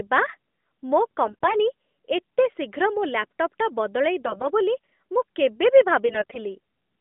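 AMR bit errors at 1.26–1.56 s, 4.26–4.47 s and 6.06–6.39 s: weakly protected frame bits arrive flipped, misplacing excitation pulses, so the narrowband speech turns briefly hoarse and gargly.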